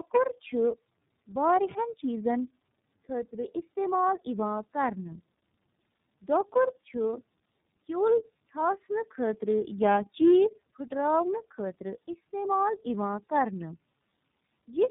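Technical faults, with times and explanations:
Throughout: tandem speech coding. The audio went through AMR-NB at 5.9 kbit/s, then G.711 A-law at 64 kbit/s, then iLBC at 13.33 kbit/s. Two low-rate speech coders were chained, the second re-encoding the first one's already degraded output, so their errors stack and the speech sounds rougher, duller and more warbly than either would alone. On a spectrogram nothing appears above 3.8 kHz, and the harmonics look smeared and unsteady.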